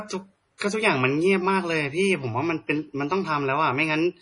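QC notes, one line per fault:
Throughout, MP3 compression: the speech has that watery, swirly texture where weak frequency detail flickers in and out between frames, and the s sounds come out metallic and chirpy. Nothing survives above about 10.5 kHz, so the top end is sliced off flat. The damage is heavy, which fits a starved bitrate around 32 kbps. The encoder is likely throwing away everything its hearing model rates as inessential, and at this rate that's a lot.
0.58 to 0.61 s, pre-echo: a short smear of hiss runs ahead of a sharp attack, roughly 34 ms of it, and the onset itself lands soft rather than crisp. The codec spreads its quantisation noise across a whole transform block, so noise pitched for the loud attack also leaks into the quiet stretch just before it. That's why you hear the hiss arrive early and the hit lose its edge.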